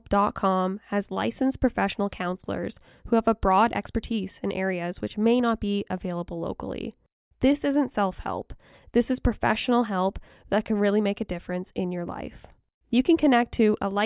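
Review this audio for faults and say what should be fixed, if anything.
Nothing in this audio needs fixing.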